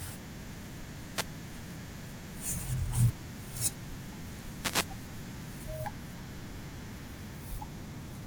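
At 1.11 to 1.29 s and 4.60 to 4.88 s, wireless microphone noise hits break through the speech. The radio signal fades, and receiver noise rises as a brief swish of static.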